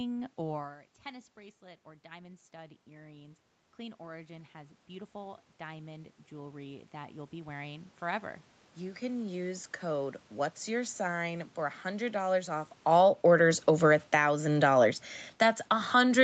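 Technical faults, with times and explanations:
0.55–9.09 s, automatic gain rising: The talker moves back around 0.5 s, and the input drops about 18 dB. The gain control slowly raises its gain by about 15 dB over eight seconds. Voice and room noise swell together until just before "use code what's your".
12.78–14.3 s and 15.26 s to the end, automatic gain falling: Near 13 s the talker moves. The gain control pulls its gain down, by about 9 dB in the first stretch. Voice and background sink together each time.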